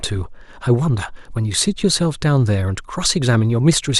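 From 1.05 s to 3.06 s the speech carries about three clicks spaced one second apart, likely clock drift buffer slips from a clock mismatch of roughly 150 ppm dropping or repeating a few samples each time.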